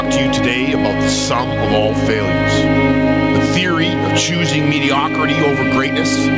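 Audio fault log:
throughout: gain pumping. The gain swings around 10 dB, pulling loud and soft parts closer in level and squashing the sound, likely from gain set far too high and pulled down by a fast limiter. The waveform looks flattened, under an 8 kHz spectrogram ceiling.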